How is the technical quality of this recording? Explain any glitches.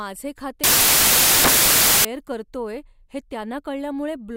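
The recording has one clear glitch. Samples built from the wrong bytes, from 0.64 to 2.05 s: the decoder assembles each sample with its bytes misaligned or swapped, so the rapidly changing low bits dominate. The speech turns into loud, harsh broadband noise, close to white on the loud sounds.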